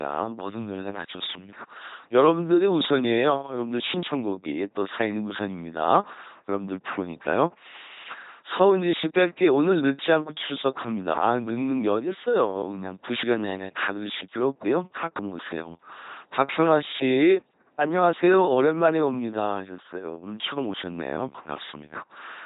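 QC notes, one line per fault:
Throughout: LPC-10 vocoder. Speech sounds heavily buzzy and robotic, fitting a 2.4 kbit/s coder's pulse-or-noise excitation; spectrogram shows rigid harmonic combs, nothing above 4 kHz.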